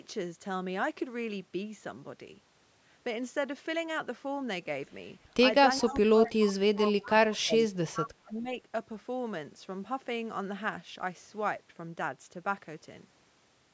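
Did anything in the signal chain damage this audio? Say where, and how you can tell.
Yes, the call processing stage. There's an echo leak: delayed copies of speech pop up at 5.78, 6.25, 6.76 and 7.95 s, each lasting a quarter second or less. They trail the original by 0.41 s, starting about 20 dB below the speech and rising to roughly 10 dB below by the later two. The likely cause is a far-end echo canceller on a loudspeaker letting residue through, which then got sent back down the line.

The same stage also produced speech suppressed in double talk. From 5.81 to 8.01 s the talker's level sags hard, at worst by something like 30 dB, then dips again from 8.23 to 8.49 s by around 20 dB. That lines up with the echo scraps, so both sides were talking at once. The suppressor couldn't separate near-end speech from echo and ducked everything, which likely explains these holes.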